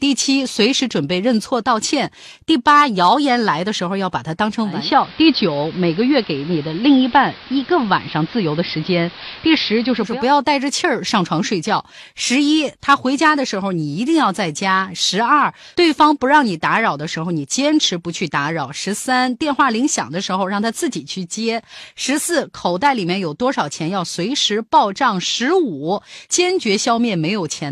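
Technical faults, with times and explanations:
4.62–10.26 s: digital radio blending to analogue. A 309 ms cross-fade drops into AM, adding hiss about 20 dB down and shifting level about 1 dB.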